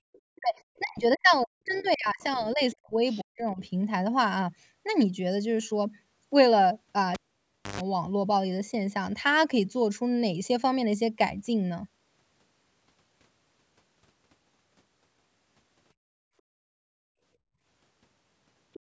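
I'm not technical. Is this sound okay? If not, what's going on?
No, there are three separate problems in this speech clip.

Other side's voice leaking through: very faint scraps of a second voice appear at 0.13, 1.75, 2.71, 3.12 and 18.73 seconds, each lasting well under a quarter of a second. This is likely the far end of a call playing on a loudspeaker and getting picked up by the microphone without being fully removed. The clue is that something extra is added: a faint voice that does not belong to the main talker.

Speech suppressed in double talk: the opposite happens from 0.38 to 0.55 seconds, from 0.79 to 3.01 seconds, and from 3.22 to 3.61 seconds. The main voice sinks sharply, almost to nothing in places, in and out in pieces. This is likely the echo-removal system getting confused when both people spoke at once and turning everything down. Unlike the leaking, nothing is added here. 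The main talker's own voice is what goes missing.

Cable pulled and plugged in: between 7.14 and 7.81 seconds there is a pop, then roughly six-tenths of a second of near silence, then a short burst of low electrical hum lasting about an eighth of a second, and another pop as the sound comes back. That hum is the 50 Hz buzz of mains power. The pops and hum show that a connection was physically broken. The echo system did not cause this dropout.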